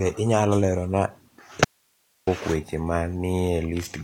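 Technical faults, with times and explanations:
1.65–2.27 s, audio dropout to a faint residue: the speech cuts out abruptly for 0.62 s, leaving only hiss roughly 45 dB down, and returns on "weche ma". Likely the feed dropped while the path stayed live. Hard edges distinguish it from a pause or fade.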